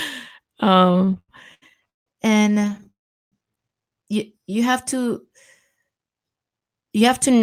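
Repeated stalls (stutter) run from 0.79 to 2.08 s. Audio was arriving more slowly than it played out, so the jitter buffer kept emptying and the receiver stretched the last sound to cover each wait. The speech halts eleven times, the longest hold 167 ms, and about a third of that stretch is filled-in sound. A second, lighter stutter follows from 2.52 to 2.87 s: nine brief catches, none longer than 10 ms, filling about a quarter of the span. Nothing is lost, but the speech drags and judders.

A call audio freeze sits between 2.91 and 3.34 s. The sound holds on its last fragment, fades, and then goes silent for 390 ms before picking up exactly where it stopped. The whole interruption is 411 ms of inserted time. The likely cause is packets held up in transit, draining the jitter buffer so the receiver had to bridge the gap rather than skip it.

A jitter buffer speed-up runs from 6.28 to 7.42 s. 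With more audio queued than it wanted, the receiver trimmed many tiny pitch-period slices back to back, removing about a tenth of a second in total. Speech in that stretch plays at 110% of normal speed with unchanged pitch, so it sounds rushed and clipped at the end of the clip.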